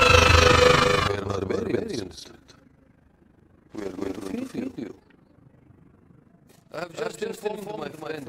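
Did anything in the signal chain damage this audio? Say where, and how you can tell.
Yes. Throughout the clip every sound is followed by a full-strength copy about a fifth of a second later, dry and with no room colour, a doubled audio track. The likely cause is a second, slower capture path feeding the same audio back into the mix.

A fast, rough tremolo also runs the whole length, the level dipping by about 11 dB roughly thirty times a second. This is overlap-add ripple from a frame-based processing stage whose windows overlap without summing to constant gain, so each frame's level rises and falls.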